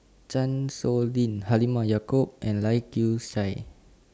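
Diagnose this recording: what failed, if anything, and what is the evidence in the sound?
Nothing stood out on listening to this speech recording that would point to a failure at any stage of the chain.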